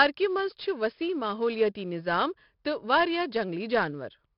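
Throughout, heavy 4-bit ADPCM compression adds gritty hiss that tracks loudness and removes everything above 5.3 kHz; a spectrogram shows a hard ceiling and noise filling loud passages.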